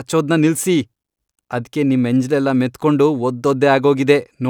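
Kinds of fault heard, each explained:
No kinds of fault are heard in this speech.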